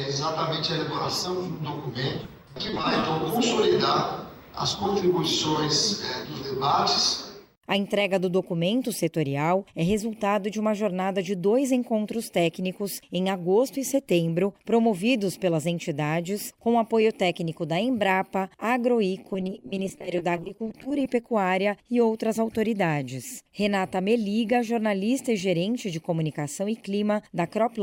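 From 2.23 to 3.03 s, and again from 19.33 to 21.06 s, repeated packet loss leaves a choppy, robotic sound: the audio breaks into holes of up to 20 ms, each patched by repeating the last fragment. About 18% and 24% of those stretches are concealed. A spectrogram shows smeared, repeated vertical slices, and the waveform shows copied cycles.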